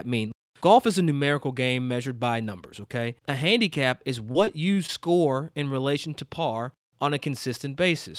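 From 4.31 to 4.90 s, just after "handicap is", the speech breaks up with repeated packet loss, giving a robotic sound. Five short gaps occur, the longest 32 ms. Each is patched by stretching the previous sound, so the speech turns choppy, with pieces missing.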